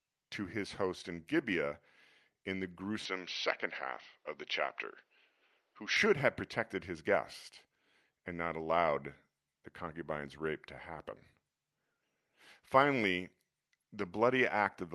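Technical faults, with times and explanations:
3.05–5.97 s, input switched to a poorer device: capture likely jumped to a lesser microphone or headset profile. Nothing above 6.1 kHz gets through, against the call path's 12 kHz, so the sound turns dull and boxy, shifts level a little and gains a faint new noise floor, with no gap at the switch.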